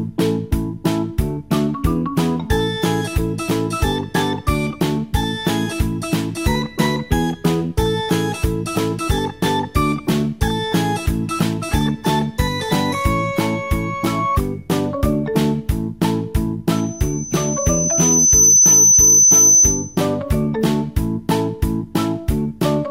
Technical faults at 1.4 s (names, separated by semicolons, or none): none